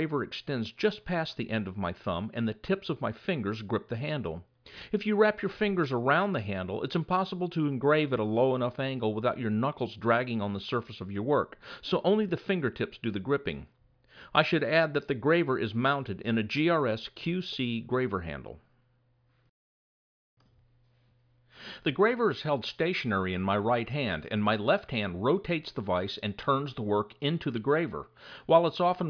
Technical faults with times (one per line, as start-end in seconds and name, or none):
none